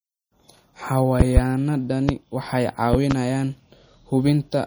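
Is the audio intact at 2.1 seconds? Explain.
No. From 2.09 to 2.12 s a loud pop sits on top of the speech, a single sharp click peaking roughly 20 dB above it. It is most likely a sudden voltage step or pulse, such as from a plug, switch or static discharge, added to the signal and shaped by the circuitry after it. The speech carries on underneath, which tells it apart from a dropout or edit, where the sound itself would break.

The same moment also carries MP3 compression damage, as does the whole clip. It is plainly audible as a watery, swirling texture, with dulled treble and smeared attacks, which fits a low bitrate around 48 kbps. The encoder cuts the upper frequencies and lets weak frequency components flicker on and off between frames. Unlike the pop, this is a continuous change in timbre rather than a brief added event.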